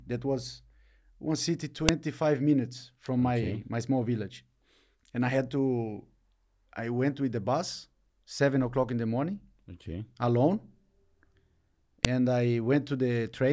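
Sharp clicks at 1.89 s and 12.05 s are a file header played as audio: header bytes from joined WAV pieces were played back as samples.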